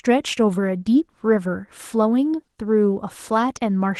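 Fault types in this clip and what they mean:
Opus voice compression: The speech was squeezed to about 16 kbps in Opus hybrid mode, so it sounds plainly hoarse and slightly robotic throughout.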